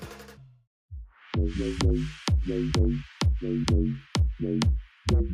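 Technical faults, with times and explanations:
No technical faults can be heard anywhere in the signal, which stays continuous throughout.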